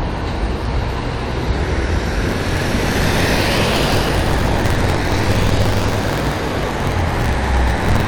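A recording of sounds with buffer tearing from 2.28 s to the end: a 43.1 Hz robotic buzz, consistent with a 1024-sample ring buffer where roughly 40% of each period replays audio about 50 ms old.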